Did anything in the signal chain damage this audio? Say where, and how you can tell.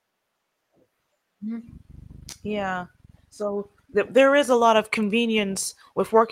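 Yes. Between about 2.29 and 2.47 s the speech shows short concealed packet loss, a network-stage fault. Roughly 20 ms of audio never arrived in time, so the receiver's decoder filled about 28 ms by extending the preceding sound and then cross-faded back, trimming about 10 ms. This produces a brief smeared wobble rather than silence. A buffer underrun or plain dropout would leave a hard gap or click. Here the hole is papered over with synthesised continuation.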